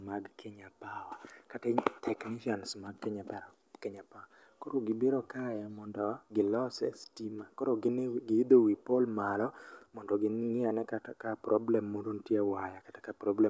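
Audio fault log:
No fault found in this speech clip.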